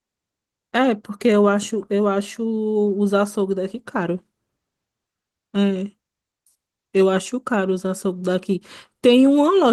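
No faults are audible here.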